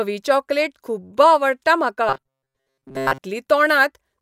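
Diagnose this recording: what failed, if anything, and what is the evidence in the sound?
Robotic sound from repeated short buffers, 2.09 to 3.19 s, just after "चॉकलेट खुब्ब आवडटा": the speech turns into a rigid 134 Hz metallic buzz. That fits a 7.5 ms block replayed through most of the span, likely a buffer underrun. Spectrogram: flat, evenly spaced harmonics. Waveform: identical repeating cycles.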